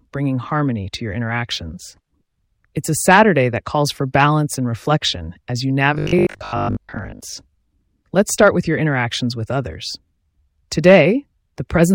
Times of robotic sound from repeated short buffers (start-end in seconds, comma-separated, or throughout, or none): 5.95-7.21